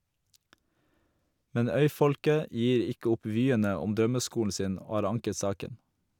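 Speech recording with no audible technical faults.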